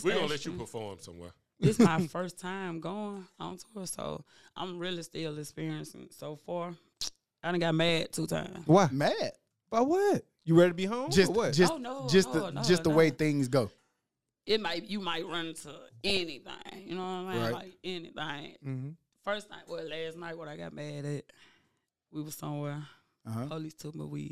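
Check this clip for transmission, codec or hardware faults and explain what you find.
Three bursts of DAB burbling occur, at 3.19 to 3.55 s, 7.85 to 8.43 s and 16.01 to 16.21 s. Weak reception let bit errors slip past the error correction into the MP2 audio data, at roughly 0.1 percent in the first burst, 0.15 percent in the second and several tenths in the last. Corrupted samples put short blips of noise into single sub-bands, and corrupted scale factors make sub-bands jump in level for up to a frame, so the sound burbles.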